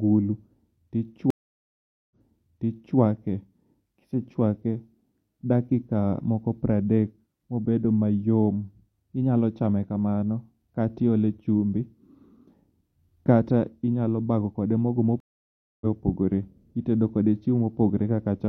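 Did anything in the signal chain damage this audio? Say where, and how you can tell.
Yes, two stream reconnects at the network stage. At 1.30 s the speech goes silent for 0.8 s, then resumes 0.88 s earlier and repeats material. At 15.20 s a 0.61 s gap resumes about 0.3 s later. Each time, the connection dropped and a fresh decoder restarted mid-stream.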